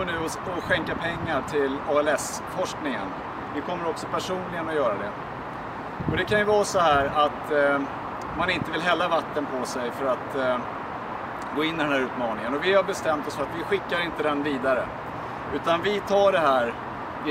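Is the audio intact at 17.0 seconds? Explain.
Yes, the audio at 17.0 seconds is intact, with no dropout, glitch or other fault at that moment.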